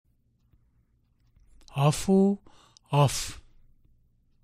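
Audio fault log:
No fault can be heard anywhere in the audio.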